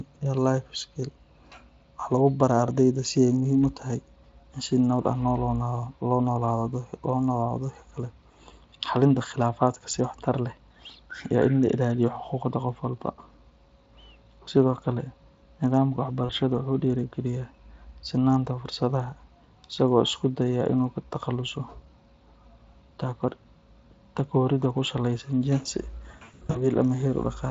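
At 16.25 s, about 40 ms of sound drops out. The gap runs to 16.32 s. It is VoIP packet loss concealed by the speech codec. The Speex decoder fills the hole by repeating its last pitch and filter at falling gain. Here that sounds like a brief stretched smear. From 26.11 s to 26.67 s the loss is heavier: about 280 ms missing, scattered over 440 ms, longest run 100 ms. The speech turns into fading, stretched stutters, and recovery lags after each gap.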